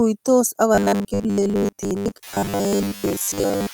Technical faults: noise suppressor artifacts; robotic sound from repeated short buffers

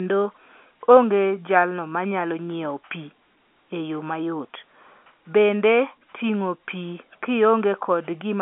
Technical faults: none

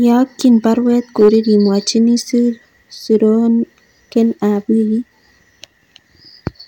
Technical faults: hard clipping

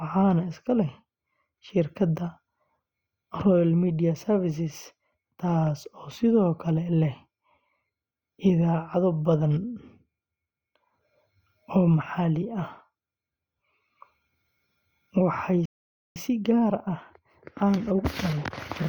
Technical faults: dropped samples; playback stall; time-compressed catch-up

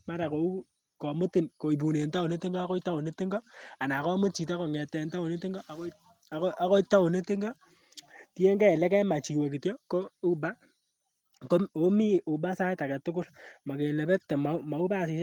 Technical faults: none

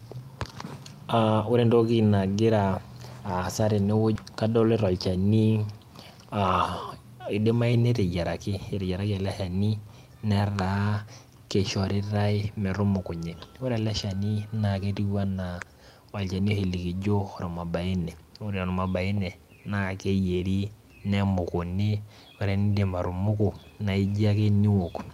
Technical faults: skip ahead; jitter buffer speed-up

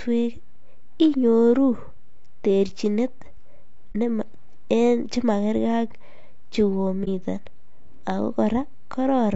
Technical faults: low-delay AAC compression; AAC frame loss with muting

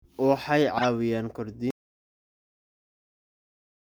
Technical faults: corrupt frame decoded; audio dropout to silence

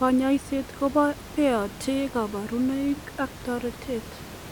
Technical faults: none

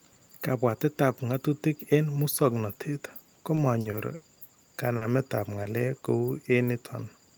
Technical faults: repeated packet loss (robotic sound); short concealed packet loss

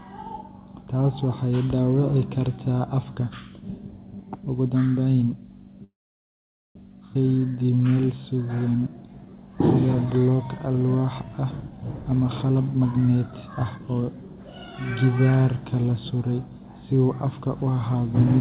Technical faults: call audio freeze; skip ahead; jitter buffer slow-down; jitter buffer speed-up

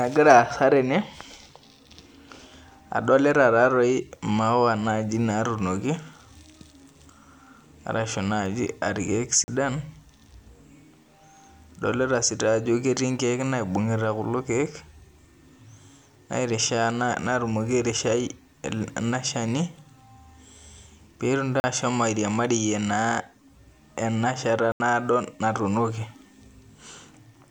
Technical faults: block of digital silence

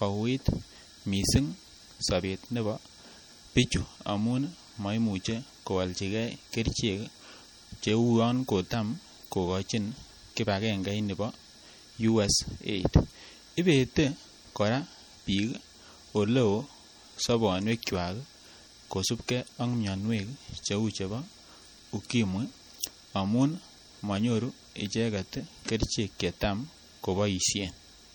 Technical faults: MP3 compression

